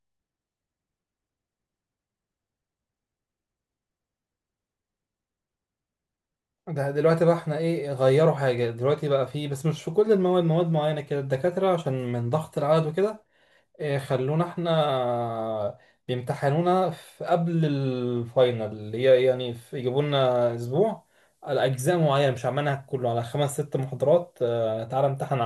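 A thin, high whistle rides under the speech from 18.82 s to 24.40 s, sitting around 15 kHz and wandering slightly between 14.59 and 14.72 kHz, roughly 35 dB below the speech. This is switching supply whistle: a switching power supply in the recording chain has dropped into an audible burst mode or is beating against another supply, and its small frequency shifts as the load changes leak into the audio as this faint tone.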